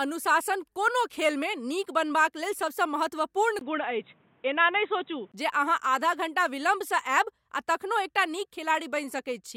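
Input switched to a poorer device, likely, from 3.59 to 5.34 s: a 20 ms silence marks the switch, then the speech turns dull and boxy with nothing above 3.8 kHz and a faint new noise floor, at roughly unchanged level, before the fuller sound returns.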